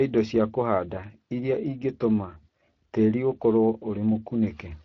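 Speex codec damage runs from the start to the end of the clip. The speech has been squeezed through a CELP coder that models the voice as a filter driven by a coded excitation, and at what sounds like a middle-range setting, around 20 kbps, that excitation is too coarse to keep it clean. Voiced sounds come out plainly noisy and hoarse.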